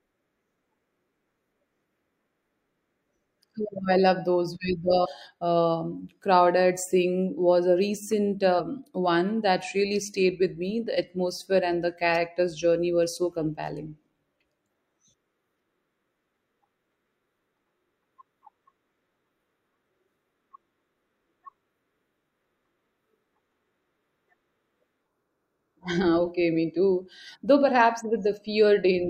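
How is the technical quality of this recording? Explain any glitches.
The recording has two brief glitches from damaged data in a compressed stream. They occur at 5.01 to 5.07 s and 8.56 to 8.61 s. Corrupted bytes made the decoder misread frames and lose sync. Each leaves a short blip of about 50 ms.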